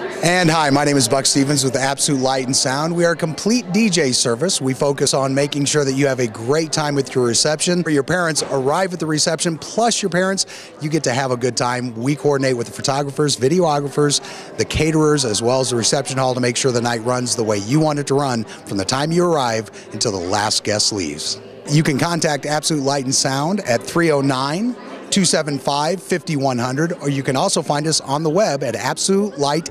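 At 7.85 s the audio jumps abruptly forward. There is a brief blip at the join, and the sound on either side does not connect. The flow breaks without a fade or a gap of silence. This is the sound of a stream segment skipped. The likely cause is a segmented stream in which one chunk failed to load. The player then carried on with the next chunk, so a stretch of the programme never played.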